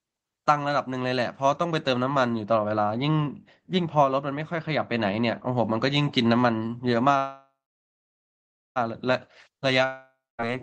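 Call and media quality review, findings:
Dull, muffled stretch, 2.42 to 5.52 s, treble down about 13 dB at 10 kHz versus 1 kHz; de-emphasis applied wrongly, treble cut on unemphasised audio or doubled.

Call audio freeze, 7.17 to 8.78 s: last sound stretched into a fading buzz or hiss, then about 1.25 s silence; resumes intact, 1.58 s later. Likely jitter buffer starved by held packets.

Long network dropout, 9.85 to 10.40 s: fading buzz or hiss then about 0.23 s silence, resumes with 0.54 s lost; likely packets never arrived through the Opus call path.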